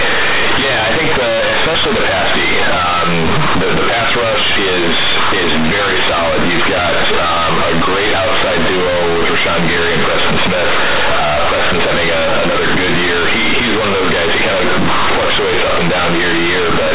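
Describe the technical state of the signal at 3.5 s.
At 3.5 s you're hearing companded audio read as linear, and it runs through the entire clip, not just this moment. The mu-law bytes are being played straight as linear 8-bit samples with no expansion step, so every sign change throws the output across roughly half its range. Quiet and loud parts land at much the same level, giving a harsh, very loud buzzing distortion with heavy noise filling the pauses, laid over the narrow telephone band of the underlying mu-law G.711 coding.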